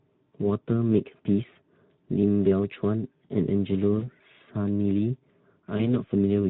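The whole recording passes through the Speex codec at a low setting, which fits a bitrate of around 11 kbps. With too few bits to code the excitation faithfully, the speech comes out plainly noisy and hoarse throughout.

VoIP packet loss concealed by the speech codec occurs at 1.53 to 1.57 s, 3.99 to 4.08 s and 5.77 to 6.0 s, each pointing to a single missing 20 ms packet. The decoder carries its last pitch and filter forward at falling gain, so the speech briefly smears into a fading buzzy tone or coloured noise and stays weakened or distorted as it recovers. This lingers longest at 5.77 s.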